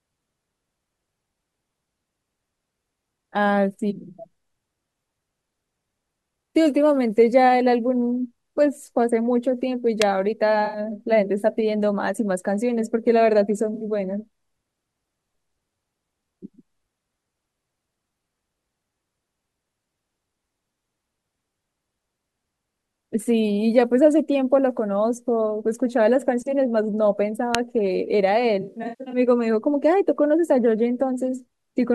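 At 10.02 s a sharp snap cuts across the speech. It is an electrical switching spike. It lasts only a few milliseconds. A nearby switch or motor arcing into the audio line is the likely cause. The same kind of snap returns at 27.55 s, even briefer. Both sit on top of the speech rather than replacing it.

From 10.65 to 10.79 s the speech smears into a brief noisy, phasey patch. This is AAC frame loss with concealment. About 85 ms is missing, which fits a run of four frames. The decoder rebuilds the gap from the last good spectrum, so it sounds blurred rather than silent. A shorter patch of 64 ms follows at 13.74 to 13.84 s. The worst stretch runs from 28.61 to 29.18 s. There, about 341 ms is lost in pieces over about half a second, with the longest gap around 150 ms. That gives a choppy, washed-out run.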